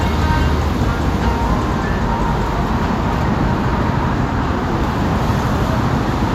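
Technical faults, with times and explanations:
No technical faults can be heard anywhere in this recording of sounds. There is nothing here to list with a time or an explanation.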